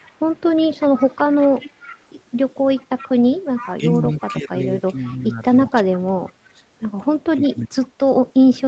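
Speech recorded over a call, with audio content stopping around 8 kHz, which fits a wideband Opus stream at roughly 40 kbps. An echo leak runs from 0.03 to 6.32 s: a copy of the talker returns 363 ms late, about 20 dB below the direct speech, most likely because the far end's loudspeaker feeds its microphone and its echo canceller leaves a residue that is sent back. The echo leak returns from 7.82 s to the end, now stronger at roughly 10 dB below the speech, with the same 363 ms delay. From 3.73 s to the end the talker's speech is suppressed in double talk. The level dips and parts drop out, at worst by around 30 dB. This likely happens while the other side is also talking. The canceller, unable to tell the near talker from the returning echo, turns both down.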